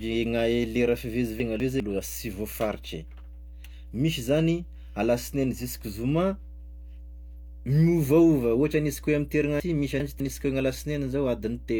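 A ground loop or nearby transformer couples the 60 Hz power line into the signal, leaving a steady mains hum about 15 dB below the speech throughout. Chunks out of order follow: a 200 ms chunk plays one slot late at 1.4 to 1.8 s and 6.6 to 7.0 s, and two slots late at 9.6 to 10.2 s, jumbling the speech at each of those hard joins.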